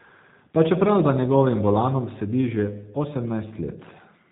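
From start to finish the speech carries G.729 codec damage, and it is plainly audible. The sound is rebuilt from a vocal tract filter, a pitch predictor and a few pulses per short frame, which fits an 8 kbit/s G.729A stream. Voices come through intelligible but rough and slightly synthetic. On a spectrogram, energy stops at a hard ceiling near 4 kHz, and harmonics look smeared. The waveform looks coarser than the original would.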